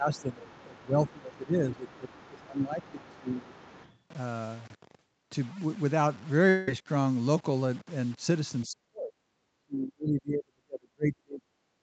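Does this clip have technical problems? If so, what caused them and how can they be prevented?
Yes. A grainy distortion follows the speech throughout. It likely comes from low bit depth without dither, around 6 bits, leaving noise only about 25 dB below the signal. Keep full resolution, or add dither when reducing bit depth.

Speech suppressed in double talk dips the talker by up to about 15 dB from 0.00 to 3.55 s. It dips far deeper, up to about 40 dB, from 8.66 to 9.15 s and from 9.57 s to the end. The likely cause is an echo canceller ducking both voices at once. Headsets or a better double-talk detector would prevent this.

The other side's voice leaking through sits faintly underneath at 0.14–0.61 s, 1.08–1.37 s, 1.73–2.42 s and 2.82–4.00 s, at about 25 to 30 dB below the speech. Residual loudspeaker echo is the likely cause. Headphones or stronger echo cancellation would stop it.

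A long network dropout at 6.49–6.69 s loses about 0.2 s of audio. The receiver fills the gap with a fading synthetic continuation, likely after packets went missing. A steadier connection or larger jitter buffer would reduce this.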